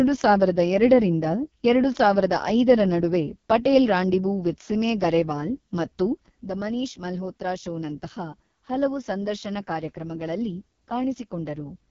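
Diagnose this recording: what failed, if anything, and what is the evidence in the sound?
Throughout, the speech sounds rough and raspy, with nothing above about 7.1 kHz and a hissy, noise-like top band. This is codec damage from the AMR wideband (HD Voice) codec. Such heavy degradation fits the lowest 6.6 kbit/s mode, where the pulse-driven vocal tract model is too coarse.

At 6.28 s the level drops abruptly by about 6 dB, with speech and background falling together, and it stays down to the end. This sudden gain jump likely comes from a gain setting or bit shift applied without a ramp, probably in call processing or the driver.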